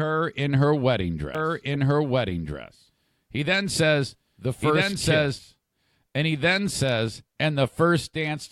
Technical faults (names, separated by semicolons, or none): doubled audio track